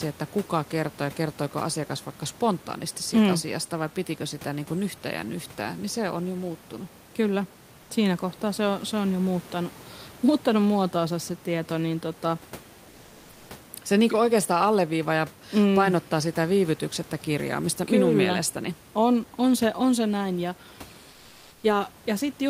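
At 12.89 s for 0.6 s, and again at 21.11 s for 0.52 s, comfort noise replaces the background in speech pauses, likely from Opus discontinuous transmission: the sender goes silent and the receiver synthesises noise to fill the gap. The textured room background turns into a smooth, even hiss, about 1 dB quieter the first time and level the second. A spectrogram shows a uniform, featureless band, and the waveform envelope goes flat.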